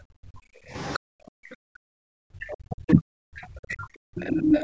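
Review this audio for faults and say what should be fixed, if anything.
Background gated by the echo canceller, from 0.0 to 1.61 s and again from 3.85 to 4.16 s: the room tone falls away by about 40 dB, for roughly a second in the first stretch and about 0.3 s in the second, then returns. The canceller clamped the microphone while its loudspeaker was active. What separates this from double-talk suppression is that the pauses and background vanish, not the talker's voice. Gentler residual suppression with comfort noise would prevent it.

Other side's voice leaking through, from 0.82 to 0.99 s and from 2.49 to 4.63 s: a second voice sits under the talker, roughly 25 dB down in the brief first scrap and only about 10 dB down in the long later stretch. The likely cause is loudspeaker sound that the echo canceller failed to remove from the microphone. Unlike room reverberation, this is a distinct voice with its own timing. 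Better acoustic isolation or a retrained echo path model would prevent it.

Speech suppressed in double talk, from 0.99 to 3.55 s: the talker's own voice dips by roughly 40 dB in pieces, adding up to roughly 0.7 s across the span, while the other side is also talking. This is likely the canceller failing to separate near speech from echo and attenuating both. Gating affects only the background, but here words themselves lose level. The upper band ends at 8 kHz throughout, as expected from call microphone processing. Proper double-talk detection would prevent it.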